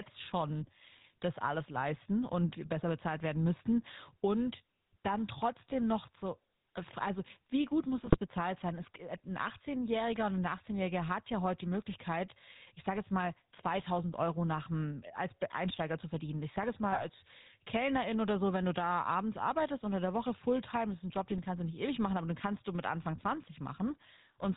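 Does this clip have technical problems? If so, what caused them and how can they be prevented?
Yes. Throughout the speech there is a buzzy, gravelly roughness, with nothing above 4 kHz, the plainly audible signature of the GSM full-rate codec, which fits a 13 kbps GSM full-rate stream. The codec reduces the voice to a vocal-tract filter excited by a sparse, regularly spaced pulse train, keeping only every third excitation sample, so the fine texture of the voice is replaced by that coarse buzz. Carrying the call over a wideband codec such as AMR-WB or Opus avoids this.

Three bursts of squawking, popping and gargling interrupt the voice, from 7.98 to 8.18 s, 16.92 to 17.05 s and 21.32 to 21.39 s. These are GSM bit errors: on a weak radio link, corrupted bits reached the decoder and scrambled its filter, pitch and gain values, so each affected frame came out with a warped spectrum or a sudden jump in level. 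The burst at 16.92 s has the highest error rate of the three, about 3%. A stronger signal, or a codec path with better error protection and concealment of bad frames, would prevent these bursts.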